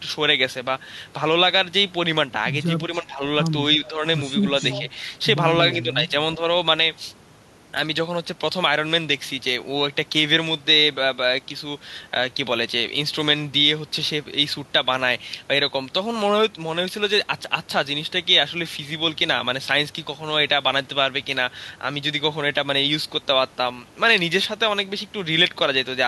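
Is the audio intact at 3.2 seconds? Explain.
No. Speech suppressed in double talk covers 2.89 to 3.22 s, so 3.2 s falls inside it. The speech dips by about 15 dB, likely because an echo canceller could not separate the near talker from far-end echo during simultaneous talk and attenuated both.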